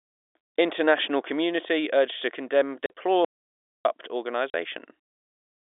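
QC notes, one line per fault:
2.86–2.90 s and 4.50–4.54 s: packet loss filled with silence. Each 40 ms hole, the first after "community urged to condemn", has hard edges. The length fits two 20 ms packets, unlike a longer, irregular dropout.
3.25–3.85 s: audio dropout to silence. About 0.6 s of silence follows "community urged to condemn", with no room tone left. Likely a lost input or mute, not packet-sized.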